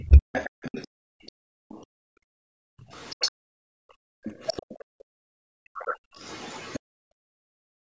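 Other side's voice leaking through runs from 0.00 to 0.87 s, a second voice sitting roughly 15 dB under the speech. This is likely loudspeaker playback reaching the microphone that the echo canceller failed to fully remove, so the far talker remains audible.

Speech suppressed in double talk overlaps it from 0.02 to 0.35 s. The talker's level falls by up to around 40 dB, for about a third of a second in all, likely because the canceller could not separate near and far speech and attenuated both.

Background gated by the echo canceller follows from 0.87 to 6.19 s. While the loudspeaker plays, the canceller clamps the microphone, dropping room sound by about 40 dB for roughly four seconds in total, so the ambience vanishes and returns.

Further leaks of the other side's voice occur at 1.69 to 1.80 s (very faint, around 30 dB down), 2.98 to 3.31 s (strongest, around 10 dB down), 4.24 to 4.76 s and 5.77 to 6.80 s (both around 20 dB down).

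Speech suppression in double talk returns from 6.96 to 7.98 s, with the voice again dipping by up to around 40 dB across roughly a third of a second.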